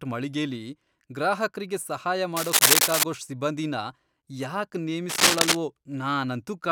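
Cable scratch noise cuts across this speech clip from 2.36 to 3.03 s and again from 5.09 to 5.57 s: bursts of dense, ragged rustling, the first well above the speech and the second somewhat quieter, likely from a worn cable or connector whose contact resistance fluctuated as it moved.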